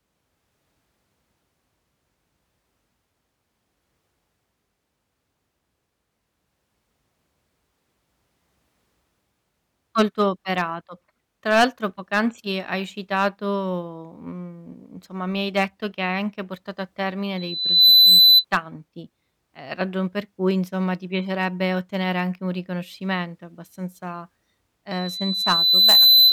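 Hard clipping runs through the whole speech clip. The signal is driven about 8 dB past what one stage could pass, so a small share of peaks is sliced flat. This adds crackly, fuzzy edges on loud syllables. The waveform shows squared-off tops, and a spectrogram shows broadband smears above them.

A loudspeaker feedback squeal starts at 17.37 s, right after "anche portato a termine", and lasts until 18.45 s. The microphone is re-amplifying its own loudspeaker at 4 kHz. Within about half a second the tone swells well above the speech into a piercing whistle. On a spectrogram it is a bright horizontal line at 4 kHz.

A second feedback squeal at the same 4 kHz begins at 24.91 s. It takes about a second to build and sits somewhat lower relative to the speech. It is still sounding when the clip ends, drawing the same steady line across the spectrogram.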